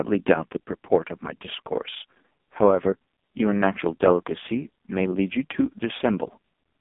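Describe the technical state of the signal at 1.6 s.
At 1.6 s the speech is passing through an AMR narrowband mobile codec, which covers the whole clip rather than a single moment. The signal sits in a telephone band of roughly 200 Hz to 3.6 kHz with nothing above 3.8 kHz. Heavy codec damage gives the voice a buzzy, synthetic quality that fits the lowest AMR-NB mode, around 4.75 kbps. A plain low-pass filter would only dull the sound. Here the voice is rebuilt from a coarse vocal-tract model.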